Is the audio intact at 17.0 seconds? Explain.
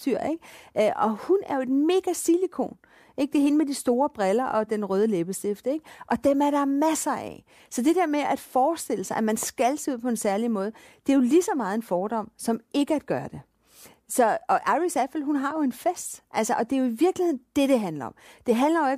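No. At 17.0 seconds, as throughout the clip, the speech carries crude rate conversion. New samples appear to have been produced by linear interpolation without an anti-imaging filter, which fits a 32 kHz to 48 kHz conversion. The interpolation error repeats with the 2:3 rate relationship and produces inharmonic tones sitting roughly 30 dB below the signal. These are heard as a gritty fizz that tracks the louder and brighter parts of the speech.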